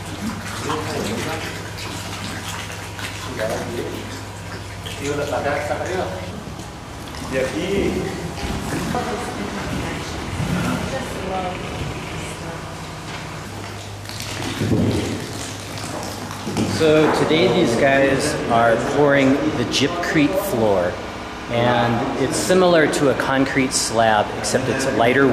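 No technical faults can be heard in this audio.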